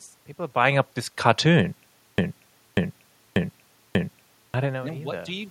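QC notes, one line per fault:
2.18–4.54 s, broken-record loop: right after "buying up this cartoon", a 0.59 s fragment plays four times back to back, identically each time, and the speech due in that stretch never arrives. The player or stream likely stalled and kept resending its last fragment.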